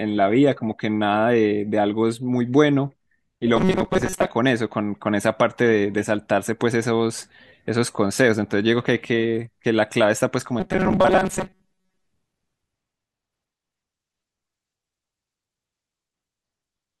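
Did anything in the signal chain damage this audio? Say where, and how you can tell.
Yes. Robotic sound from repeated short buffers appears twice in this speech, from 3.56 to 4.27 s and from 10.60 to 12.07 s. Both stretches take on a rigid metallic buzz at 188 Hz that still loosely tracks the speech. The stage is likely the driver or buffer level: audio arrived too slowly, so short chunks of about 5.3 ms were replayed in its place. About half the first stretch and most of the second is repeated material.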